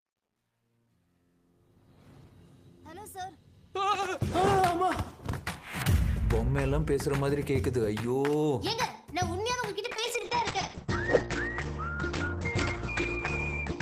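From 0.0 to 3.9 s, the fade-in rises smoothly in level but carries truncation distortion. Its quietest stretch, up to about 2.4 s, turns gritty, which points to a stage keeping only about 11 bits without dither. Unlike hiss, the grit rises and falls with the signal.

At 8.00 to 8.02 s a single loud pop lands a few decibels above the sound, which carries on beneath it uninterrupted. It is likely a voltage step from a switch, plug or static discharge. Being one sharp event rather than repeated ticks separates it from clicks caused by dropouts.

From 9.85 s to the end, a call bitrate drop leaves the audio rough and watery. The top end is also dulled, with the band shrinking from 20 kHz to about 8 kHz. This fits the encoder falling from 32 to 9 kbps. The loss is steady rather than gapped, which distinguishes it from packet loss.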